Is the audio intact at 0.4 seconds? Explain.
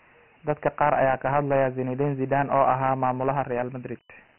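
No. At 0.4 s the speech carries Dialogic VOX ADPCM damage, present throughout the clip. Each sample is coded as a coarse 4-bit step, which fits a 24 kbps stream. Nothing remains above 3.4 kHz, and a gritty hiss rides on the speech.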